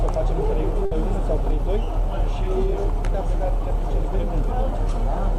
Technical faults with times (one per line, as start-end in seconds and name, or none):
0.85-0.94 burst of packet loss